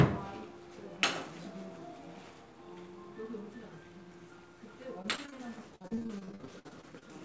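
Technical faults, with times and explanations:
5.02 to 5.34 s and 5.76 to 7.03 s, repeated packet loss (robotic sound): the sound keeps breaking up, with 4 short holes in the first stretch and 17 in the second, the longest 55 ms. Each gap gets papered over by stretching the last bit of sound, hence the choppy, robotic feel. Nothing above 8 kHz fits a G.722 call path.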